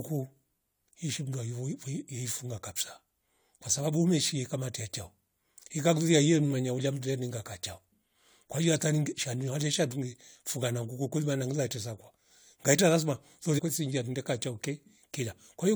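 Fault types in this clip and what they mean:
Damaged data in a compressed stream: near the end of this speech, from 13.57 to 13.60 s, corrupted bytes make the decoder misread the frame there and resync at the next valid header, leaving a short glitch of about 24 ms. On a spectrogram it appears as a thin vertical disturbance that breaks the harmonic pattern. The waveform shows a sudden discontinuity, with the normal envelope interrupted.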